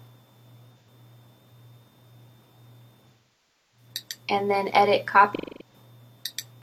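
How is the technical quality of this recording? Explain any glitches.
The recording suffers from AAC frame loss with concealment, at 0.78 s, 3.09 to 3.88 s, and 5.35 to 5.74 s. Each time, coded frames failed to arrive and the decoder rebuilt the gap from the last good spectrum. The 85 ms gap at 0.78 s becomes a brief smeared, noisy patch. The 256 ms gap at 5.35 s sounds phasey. The 640 ms gap at 3.09 s decays into a very faint noise floor and fades back in.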